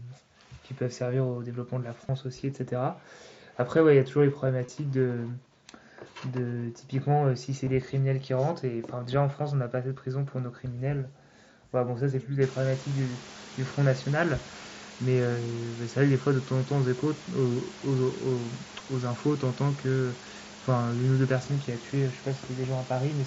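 At 2.07–2.09, 4.66–4.69, 7.65 and 18.79 s there's concealed Bluetooth headset packet loss: short gaps of roughly 8 to 23 ms where the phone patched over missing headset audio by repeating a recent matching stretch. The first three come across as a brief buzzy smear, while the single loss at 18.79 s is nearly hidden.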